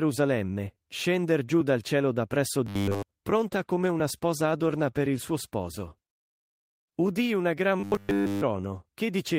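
From 2.67 to 3.03 s, right after "dal cielo da presso", the speech collapses into a rigid metallic buzz at 100 Hz: robotic sound from repeated short buffers. The likely cause is audio arriving too late, so the player loops the last 10 ms over and over while the real signal is skipped. Essentially the whole stretch is repetition. A waveform shows one identical 10 ms cycle tiled end to end, and a spectrogram shows a flat comb of harmonics spaced 100 Hz apart in place of moving formants.

A call bitrate drop follows from 3.36 to 5.59 s. The encoder's target falls from 32 to 18 kbps and stays at that floor for 2.16 s. With fewer bits the speech is coded coarsely, so it sounds rough and watery until the rate comes back. On a spectrogram the fine harmonic detail smears into blotchy, quantised patches, with gaps and swirls where the encoder has dropped content.

From 7.8 to 8.42 s, just after "una gran", the same 100 Hz robotic buzz returns, again almost entirely repeated material, with the same 10 ms periodic waveform and the same rigid harmonic comb in the spectrogram.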